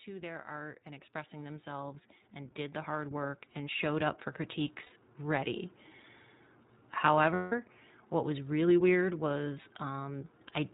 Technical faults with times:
0.00-10.74 iLBC codec
0.05-4.26 automatic gain rising
4.83-4.93 lost iLBC frames
7.34-7.52 lost iLBC frames

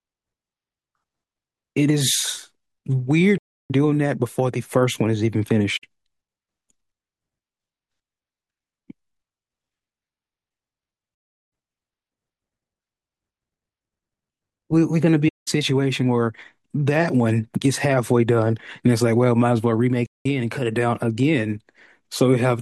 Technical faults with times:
3.38-3.71 AAC frame loss with muting
5.76-5.84 AAC frame loss with muting
11.13-11.52 AAC frame loss with muting
15.28-15.48 AAC frame loss with muting
20.06-20.26 AAC frame loss with muting

